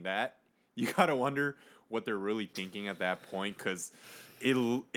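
From 0.95 s to the end, automatic gain rising lifts the level as the gain control, judging the input too quiet, keeps raising its gain. Speech and background noise swell together; the waveform envelope widens steadily, and the spectrogram brightens across all frequencies, noise floor included.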